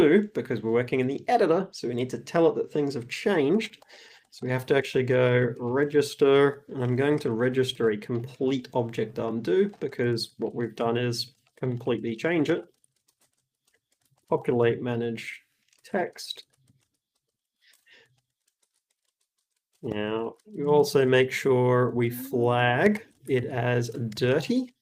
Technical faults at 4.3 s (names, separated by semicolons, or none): none